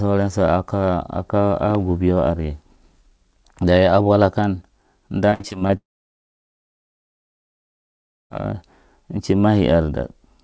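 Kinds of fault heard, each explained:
Repeated packet loss (robotic sound): From 5.30 to 5.71 s the speech turns choppy, with pieces missing. Six short gaps, the longest 60 ms, were each patched by stretching the preceding sound, so about 37% of that stretch is filled-in audio.
Long network dropout: From 5.77 to 8.32 s the speech vanishes, and about 2.5 s of near silence follows before it resumes past the missing part. The likely cause is a long break in incoming audio over this G.722 call path, which tops out at 8 kHz.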